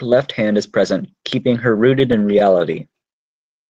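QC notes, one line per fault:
1.99–3.03 s: repeated stalls (stutter). Late packets drained the jitter buffer eleven times. Each gap, none over 13 ms, was filled by holding the preceding speech, so nothing is lost but the delivery drags.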